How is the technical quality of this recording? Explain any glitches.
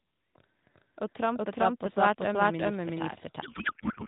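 The recording has two clear problems: the speech is doubled throughout, and the last part collapses into noise.

The doubled audio track runs the whole length. Every phrase is followed by a second, equally loud copy a bit under half a second later, so the speech sounds like it overlaps itself in a hard, dry echo. The copy is full-band, with no decay or room colour. The likely cause is the same signal reaching the mix twice, once directly and once through a slower path that lags by a fixed amount.

The codec payload misread runs from 3.42 s to the end. The speech suddenly turns into garbled noise and warble that barely follows what was being said. It sounds like the receiver stopped decoding real speech and started producing synthetic gibberish. The audio travels through the AMR narrowband mobile codec, which is why the whole clip is band-limited below 4 kHz with a slightly synthetic edge consistent with a 12.2 kbps mode. 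The sender packs the AMR frames octet-aligned, but the receiver reads them as bandwidth-efficient. Every field lands in the wrong place, so the decoder synthesises from nonsense parameters until the formats match again.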